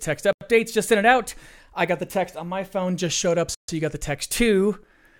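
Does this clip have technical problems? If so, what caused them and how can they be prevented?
Yes. The speech drops to silence twice, at 0.33 to 0.41 s and at 3.55 to 3.69 s. The gaps last 84 ms and 139 ms. The second falls after "phone just showed up", with the sound resuming at "you got the". Each sounds like a Bluetooth stall. Interference likely held up packets, so the headphones' buffer emptied and playback halted until the resent data arrived. To prevent it, keep the phone close with a clear line of sight and away from busy 2.4 GHz sources.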